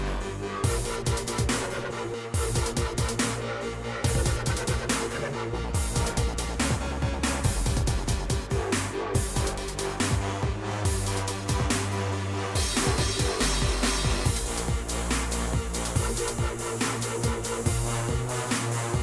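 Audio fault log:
Nothing stood out on listening to this audio.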